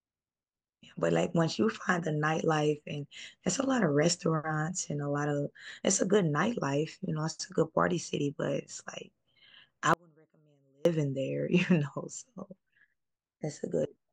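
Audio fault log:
9.94–10.85 s, audio dropout to a faint residue. The speech cuts out abruptly for 0.92 s. Only a faint trace remains, roughly 35 dB below normal level. It is no pause or fade. The signal was likely lost while the path stayed live.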